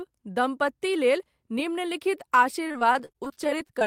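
From 2.67 to 3.83 s, the speech breaks into repeated packet loss, producing a robotic sound. A rapid run of short gaps, none longer than 32 ms, is patched by stretching the preceding sound. About a quarter of that stretch is filled-in audio, so it sounds choppy and robotic.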